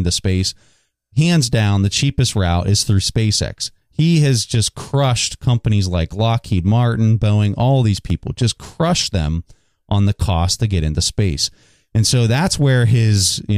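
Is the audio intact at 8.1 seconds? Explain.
No. From 7.84 to 8.36 s, just before "crushed them on the", five short ticks and tiny gaps, the longest only a few milliseconds, break up the speech. These are CD scratch ticks: a disc blemish wipes out more data than error correction can rebuild, once per revolution, so the player patches or mutes those samples.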